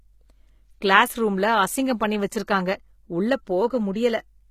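Throughout, the speech has gritty, lispy s sounds from likely HE-AAC compression at a low bitrate; a spectrogram shows smeared, copied-looking treble ending near 14.9 kHz.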